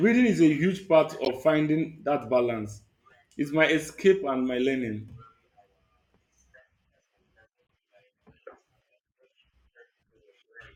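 A corrupt frame decoded from 1.24 to 1.28 s puts a brief glitch into the speech. Flipped bits in a few compressed frames were played anyway, so misread gains and codes scattered energy at wrong frequencies, peaking loudly at about -10 dBFS.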